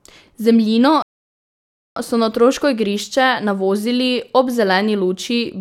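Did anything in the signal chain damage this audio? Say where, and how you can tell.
Yes: a rebuffering stall at playback, from 1.02 to 1.96 s. The speech drops to silence for about 0.94 s, then picks up exactly where it left off, with nothing missing. The player emptied its download buffer and waited for more data, adding time rather than losing any.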